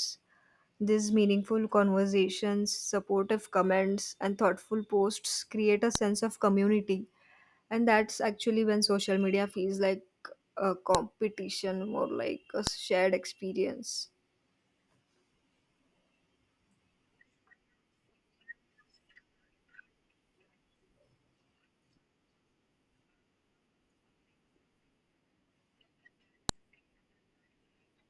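Speech with a file header played as audio: sharp snaps at 5.95, 10.95, 12.67 and 26.49 s, each a joined piece's header bytes. Unlike signal-dependent clicks, they land regardless of the sound.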